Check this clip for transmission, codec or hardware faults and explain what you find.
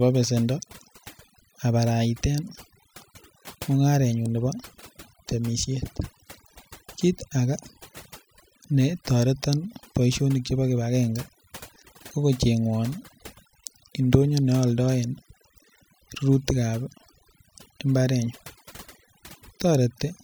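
One processing fault runs through the whole speech clip: overdone noise removal. From start to end, the noise reduction is set far too aggressively. Frequency bands close to its noise estimate are pulled down hard or gated off entirely, so the background collapses to near silence flecked with twinkling artefacts, and the quieter components of the voice are stripped away.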